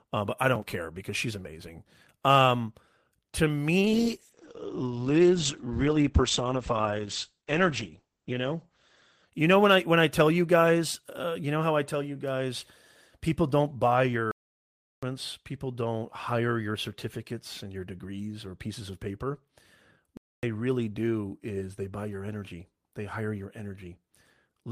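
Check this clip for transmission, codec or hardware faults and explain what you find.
Three faults affect this speech: one drop in call bitrate and two playback stalls.

Call bitrate drop, 3.83 to 9.69 s, ending just before "I when I tell". The bandwidth estimate fell, and the encoder went from 32 to 9 kbps for about 4.5 s at the lowest. The band narrows from 20 kHz to 8 kHz, so the speech turns coarse and muffled until the rate recovers.

Playback stalls, 14.31 to 15.03 s (713 ms) and 20.17 to 20.43 s (258 ms). The first falls between "guys people don't buy" and "people don't hire your", and the second comes just before "really do is they". The output goes silent mid-flow and then resumes, likely because the player ran short of data or its thread was blocked.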